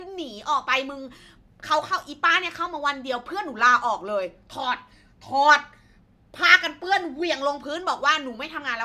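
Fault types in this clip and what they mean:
No technical faults can be heard anywhere in this speech recording. The audio carries on without any break, glitch or change in level that would call for a line here.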